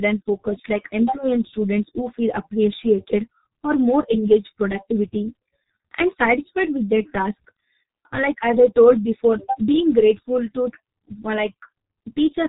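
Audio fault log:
Throughout, G.723.1 codec: the speech is heavily muffled and hoarse, with blurred consonants and nothing above 4 kHz. The sound fits a low-rate telephony codec near 6.3 kbit/s. It codes speech in 30 ms frames and updates its voice model too slowly to follow quick articulation.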